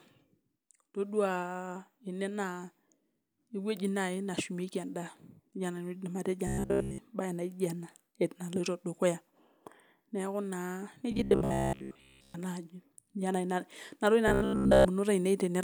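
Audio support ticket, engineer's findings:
Robotic sound from repeated short buffers at 6.47–6.98 s (after "nejia nanu", fully buzzy), 11.11–12.34 s (after "neeku naa") and 14.28–14.88 s (both mostly buzzy). A steady 66.7 Hz buzz fits a looped 15 ms chunk. Likely late-arriving audio, with playback filling the gaps.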